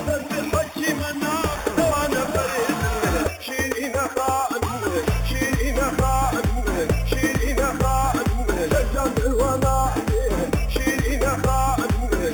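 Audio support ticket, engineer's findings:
Imaging from sample-and-hold upsampling, whole clip. Bright metallic fizz tracking the sound's level, about 16 dB below it. Material raised from 8 kHz to 44.1 kHz by repeating samples, no smoothing filter. First mirror band 4 kHz to 8 kHz, moving opposite to pitch.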